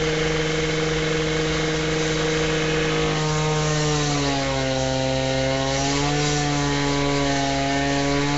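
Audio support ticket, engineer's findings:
Rough, hissy, underwater smear throughout; spectrogram: hard ceiling at 7.7 kHz, noise-filled gaps where bits ran out. Likely Nellymoser compression, fits a 32 kbps stream.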